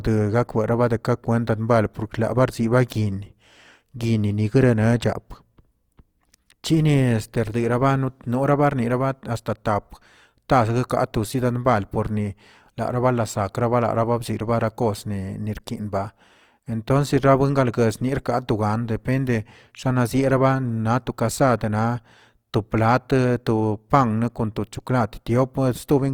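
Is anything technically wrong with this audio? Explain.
Yes. Throughout the speech there is plainly audible codec damage, most likely Opus compression in its music (CELT) mode. The encoder preserves each band's overall energy but, short of bits, fills detail by copying lower bands or injecting noise, so voiced tones come out rough, grainy and noisy rather than swirly. Bandwidth stays full, with content reaching about 20.4 kHz, and the degree of roughness fits a rate around 24 kbps.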